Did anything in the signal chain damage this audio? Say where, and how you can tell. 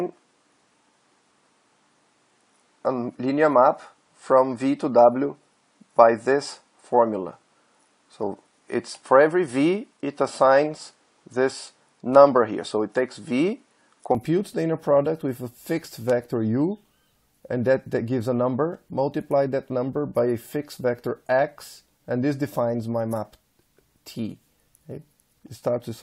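Yes. From the start until 14.15 s the audio has a duller, boxier tone, with nothing above 10.1 kHz, and at 14.15 s it opens up abruptly with no gap. That points to the input stage, where capture most likely began on a poorer device and then switched back to the better one. On a spectrogram the top band is empty up to 14.15 s and then fills in. The waveform shows a level step of about 5 dB there, and the background noise changes character, sitting well below the signal.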